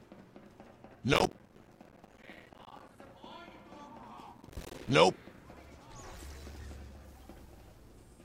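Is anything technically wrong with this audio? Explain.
Yes. Processor overload crackle appears twice, from 1.14 to 2.99 s and again from 4.37 to 4.90 s. The processor could not finish its short audio buffers on time, each about 5 ms, and many missed their deadlines in a row, with silence left in place of each one. The sound is chopped by many tiny dropouts with hard edges, which merge into a gritty, tearing crackle. It is longer in the first burst, and it stops once the load eases.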